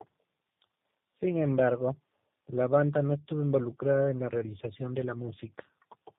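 Speech marred throughout by tandem speech coding: it sounds rougher and more warbly than one low-rate codec alone would, the telltale of two speech coders in sequence, likely an AMR-type codec feeding a G.729-type one, the second re-coding the first's errors, with nothing above 3.7 kHz.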